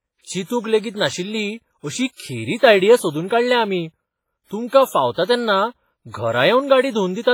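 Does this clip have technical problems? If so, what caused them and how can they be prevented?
Yes. Throughout the speech there is heavy ringing, washy smearing and a hiss that breathes with the signal, likely WMA compression at a low bitrate, around 24 kbps. Long transform blocks spread quantisation noise over tens of milliseconds and zero weak spectral lines. To prevent it, encode at a higher bitrate or use a lossless format.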